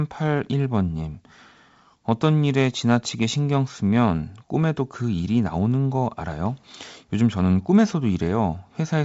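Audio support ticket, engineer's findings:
No faults found: speech band-limited to 7.7 kHz, which points to G.722 wideband telephone coding, likely in its full 64 kbit/s mode, with upper-band coding hiss faint at most.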